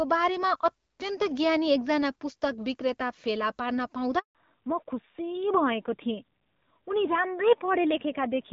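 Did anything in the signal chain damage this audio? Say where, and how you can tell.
Yes. At the network stage there is a handover gap at 4.19 s: the speech dies away within a few tens of milliseconds and stays silent for 160 ms, until 4.35 s, while the call switched networks and no frames arrived. The waveform shows a flat stretch, and the spectrogram a blank vertical band.

At the codec stage, a fallback to narrowband begins at 4.35 s and lasts to the end. Before it, the wideband link, with only light coding roughness that fits AMR-WB at 12.65 kbit/s, fills the spectrogram to about 7 kHz. Afterwards everything above 4 kHz is gone, a hard ceiling, and the speech sounds duller and rougher, which fits AMR-NB at 7.4 kbit/s.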